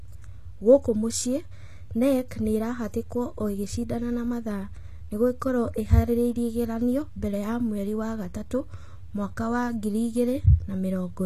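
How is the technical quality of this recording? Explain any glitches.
The speech has plainly audible compression damage from start to finish, likely HE-AAC at a very low bitrate, around 20 kbps. The treble is rebuilt from copied lower bands, so s sounds turn gritty and metallic. Unlike a plain low-pass codec, the top stays bright rather than dull.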